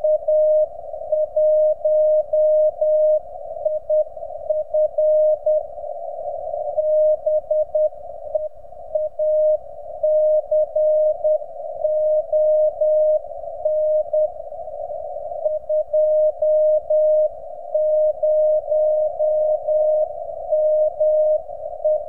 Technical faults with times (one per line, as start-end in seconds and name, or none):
none